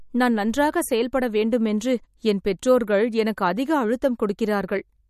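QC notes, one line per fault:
Throughout, MP3 compression, likely from a low-bitrate encode: the speech has a plainly audible watery, swirling texture, and the treble stops dead at 15.2 kHz, which fits roughly 48 kbps. Short of bits, the encoder drops weak frequency lines that blink on and off between frames, so s sounds turn metallic and chirpy and consonant onsets smear. A spectrogram shows a flat ceiling at 15.2 kHz above patchy, flickering holes in the upper bands.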